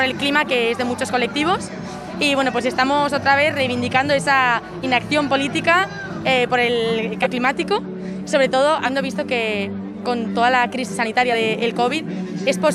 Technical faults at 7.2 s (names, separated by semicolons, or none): compressed frames skipped